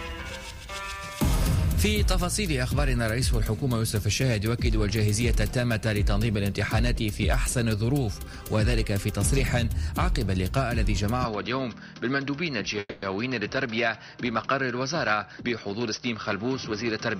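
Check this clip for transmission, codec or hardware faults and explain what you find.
Three faults appear, all from 11.25 s onward.

From 11.25 s to the end the sound turns duller, with nothing above 6 kHz, drops about 5 dB in level, and gains a new background noise roughly 55 dB down. There is no gap at the change. The likely cause is an input switched to a poorer device with a narrower band and its own noise.

From 12.79 to 13.04 s there is a call audio freeze. The last sound is stretched into a fading buzz or hiss over 230 ms, ending in about 30 ms of silence. Delayed packets likely emptied the jitter buffer, and playback then resumed where it stopped. Nothing is lost, but the stream now runs 230 ms late.

From 15.30 to 17.09 s a jitter buffer speed-up plays the audio at 111% speed with the pitch unchanged. To recover the added delay, the receiver cut roughly 200 ms in short pitch-period pieces, so this passage sounds hurried.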